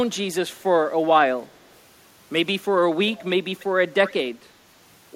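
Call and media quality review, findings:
Echo leak, four short bursts at 1.49–1.59 s, 3.12–3.30 s, 3.57–3.66 s and 4.06–4.14 s. A delayed copy of the speech trails it by about 0.3 s (306 ms first, 292 ms after). Barely audible at first, then faint, then fairly obvious by 4.06 s. Likely the far end's echo canceller on a speakerphone, letting residual loudspeaker pickup back into its mic feed and returning it to us.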